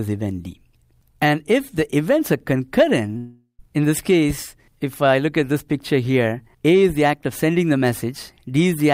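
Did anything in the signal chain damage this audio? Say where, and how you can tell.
Yes, there's a long network dropout from about 3.17 to 3.61 s. Right at 3.17 s the last bit of sound gets smeared into a buzzy tail that fades out, then there's about 100 ms of plain silence before the audio picks up again, skipped ahead by roughly 0.42 s. That's likely packet loss: the receiver's concealment kept repeating the last sound until it gave up, and the lost stretch never came back.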